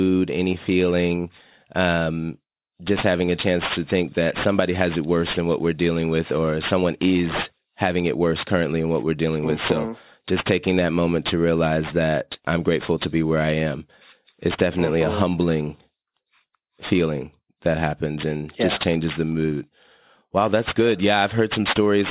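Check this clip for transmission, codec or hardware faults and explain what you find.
One fault runs through the whole clip: aliasing. The speech appears to have been converted down to a lower sample rate, one that fits 8 kHz, without an anti-aliasing filter. Energy above the new 4 kHz limit, including the upper parts of sibilants, was folded back below 4 kHz onto unrelated frequencies instead of being removed. These false components sit roughly 15 dB below the speech, giving s and sh sounds a gritty, metallic edge, with the spectrum packed right up to 4 kHz.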